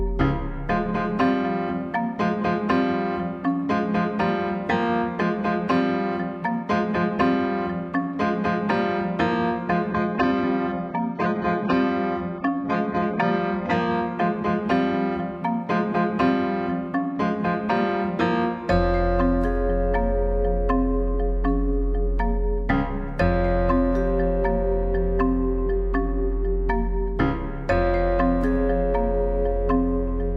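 From 9.91 to 13.91 s the sound abruptly turns dull, with nothing above about 7.9 kHz and rising codec artefacts, then snaps back without a gap. This is an adaptive stream at a lower bitrate, consistent with a very low-rate HE-AAC rendition.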